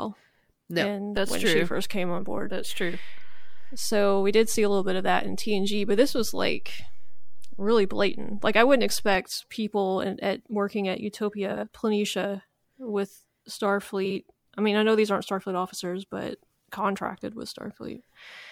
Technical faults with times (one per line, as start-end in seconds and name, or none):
1.17-9.15 DC step
11.52-11.63 frames out of order
14.05-14.16 frames out of order